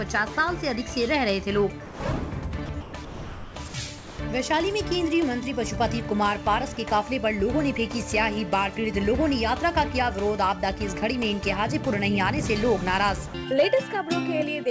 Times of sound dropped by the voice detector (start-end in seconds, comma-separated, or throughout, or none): 1.85-2.00, 2.66-4.19, 6.74-6.77, 13.28-13.34